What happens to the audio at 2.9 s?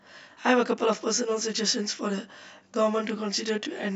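At 2.9 s you're hearing the channel delay (comb filtering) that runs through the whole clip. One channel lags by around 20 ms, so the mono sum cancels at evenly spaced frequencies starting near 30 Hz, leaving the speech rough and slightly doubled.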